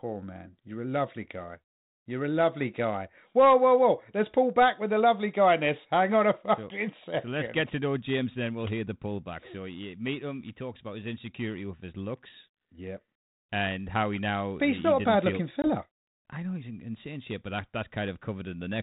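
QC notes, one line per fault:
15.62 to 15.68 s, packet loss on an ADPCM call: just after "bad feel looking" there's a hard-edged gap of 20 ms, about one packet's worth, filled with silence. The G.726 decoder, running at 32 kbit/s with light coding damage, loses track of the sender's adaptive predictor and step size during the gap. So the speech comes back distorted for a moment and settles by about 15.68 s, once the decoder's state catches up.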